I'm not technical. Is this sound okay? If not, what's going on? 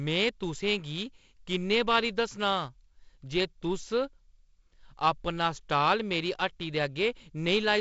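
Yes, it's fine: this speech has come through an ordinary wideband phone-call system, so it has that slightly trimmed phone-line top end, with nothing above about 7.7 kHz and a faint touch of hiss, which is just how that kind of call normally sounds.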